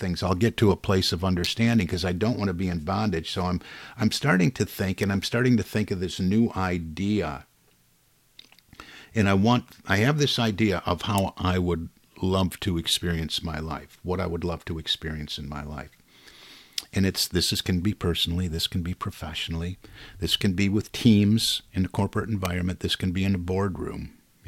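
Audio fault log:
1.44–1.47 s, 5.03 s, 11.18 s, 22.45 s: electrical switching spike, sharp snaps on top of the speech peaking at about -15 to -5 dBFS, likely nearby switch arcs picked up by the line.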